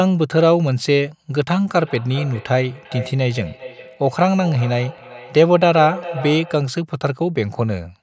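Speech with a feedback echo between two devices from 1.71 s to 6.78 s. The sound returns at a fixed spacing of roughly 0.4 s, peaking about 14 dB below the direct speech. Another device in the room plays back the call, the microphone picks it up again, and no echo canceller removes it. Reverberation would smear continuously, but here each return is a distinct, thinner, more ringing copy at a steady interval.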